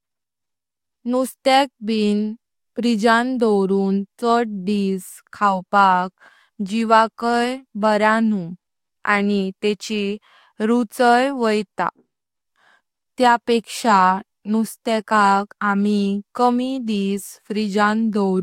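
Listening through the speech recording, nothing stood out as a technical fault at any point.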